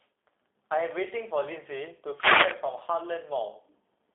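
From start to finish the speech carries G.729 codec damage, consistent with 8 kbit/s coding. Only the telephone band of roughly 300 Hz to 3.5 kHz survives, and a spectrogram shows a hard ceiling near 3.6 kHz. The rebuilt speech sounds plainly rough, buzzy and synthetic.

From 2.10 to 2.63 s a wireless microphone noise hit breaks through as a half-second swish of static, where the radio link faded and receiver noise rose. On a spectrogram it is a broadband hiss patch; the waveform shows a ragged, noisy bulge.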